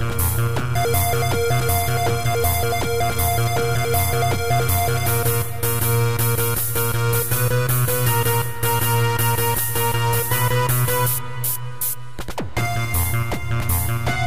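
No technical faults can be heard anywhere in this audio.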